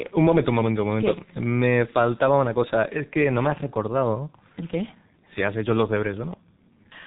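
Throughout the speech, the signal has gone through a G.723.1 codec at a rate that sounds like roughly 6 kbit/s, with heavy damage. Nothing above 3.8 kHz survives, and the coarse, slowly updated voice model leaves the speech muffled and hoarse, with smeared consonants.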